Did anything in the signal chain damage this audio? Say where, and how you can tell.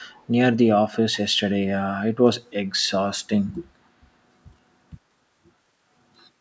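Yes, call processing: from 0.02 to 0.27 s a faint copy of the speech returns 509 ms late. This echo leak likely comes from an echo canceller missing loudspeaker pickup.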